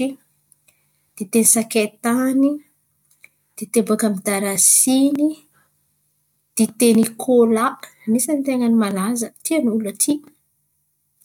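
No technical faults can be heard anywhere in the recorded speech; the signal stays intact and continuous for its whole duration.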